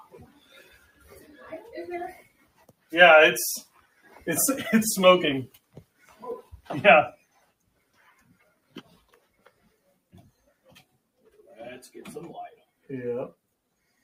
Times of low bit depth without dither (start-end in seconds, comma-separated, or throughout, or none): none